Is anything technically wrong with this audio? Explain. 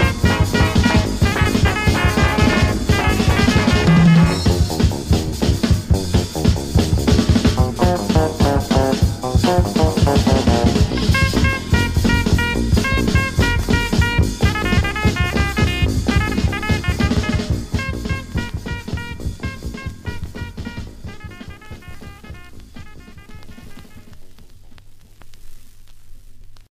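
No, no technical faults heard.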